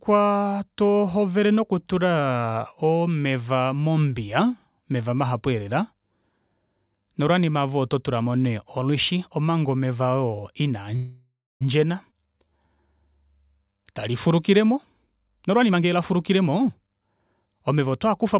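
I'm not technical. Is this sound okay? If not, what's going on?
No, there are a few hiccups, all of the kind you get on an internet call. The call itself sounds like a phone line, with nothing above about 4 kHz, so it's a bit muffled.

From 10.96 to 11.63 s there's a call audio freeze. The sound stalls and the last bit of it gets stretched into a fading buzz or hiss, ending in about a quarter second of silence. This was likely caused by audio packets getting held up on the way, so the receiver had nothing new to play for about 0.65 s. When they arrived, the speech picked up where it left off, so nothing was lost. It just paused.

At about 12.11 to 12.13 s there's a skip ahead. Roughly a fifth of a second of speech is simply gone, and the two sides are stitched together almost instantly, so it sounds like a tiny jump. That bit of audio was dropped, either on the way or by the receiver, while later audio was already waiting.

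Right after that, from 12.14 to 12.95 s, there's a jitter buffer slow-down. The speech plays at about 78% speed without the pitch changing. Sounds get drawn out, maybe with a slight wobble. The receiver repeated tiny slivers of sound to rebuild its reserve, adding about 0.19 s.

From 14.72 s to 18.35 s there's a jitter buffer speed-up. The speech runs at about 115% speed, again at normal pitch, so it sounds a bit hurried. The receiver had too much audio queued up and kept snipping out tiny pieces to cut the delay, removing roughly half a second in total.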